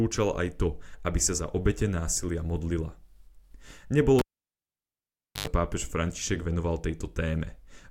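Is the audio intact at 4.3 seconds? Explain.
No, at 4.3 seconds you're inside a cable pulled and plugged in event that runs from about 4.19 to 5.47 s. The live lead gets yanked, so there's a pop and then near silence for roughly 1.24 s. As it's pushed back in, the tip touches first, giving about 95 ms of 50 Hz mains buzz before the full connection lands with another pop and the speech comes back.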